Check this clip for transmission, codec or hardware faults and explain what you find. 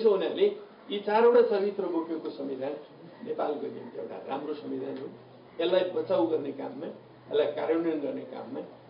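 No faults detected here.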